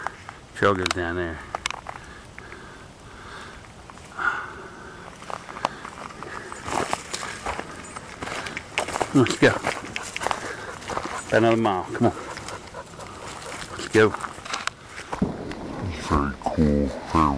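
Right at the end, from about 15.15 s to 17.38 s, the sound drops into a wrong sample rate fault. Everything slows to about 0.69 times normal speed and sinks by roughly 6.5 semitones, with pitch and tempo falling together. That locked ratio points to samples captured at 32 kHz being clocked out at 22 kHz with no resampling, so the whole tail plays back low, slow and dragged.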